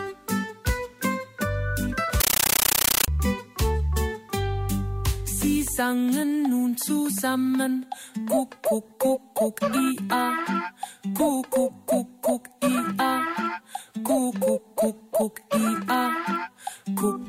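From 2.20 s to 3.08 s the sound is replaced by very loud, harsh static with a rapid chattering texture, repeating at about 31 times a second. This is a compressed stream played as audio: an AC-3 (Dolby Digital) bitstream was passed through as if it were ordinary samples, never decoded. Each frame comes out as a noise burst of about 13.3 ms followed by silent padding, and the burst density fits a 640 kbps stream.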